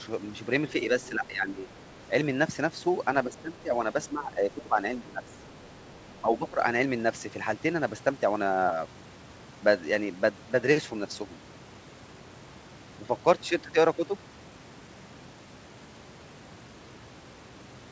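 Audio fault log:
1.05–1.09 s, other side's voice leaking through: a brief faint scrap of a second voice, about 25 dB below the talker, likely echo the canceller didn't fully remove.
1.1–1.69 s, 3.24–3.74 s, 4.12–4.79 s, 4.95–5.3 s, 6.22–6.6 s, speech suppressed in double talk: the talker sags by about 10 to 15 dB, likely the canceller turning everything down while both sides overlapped.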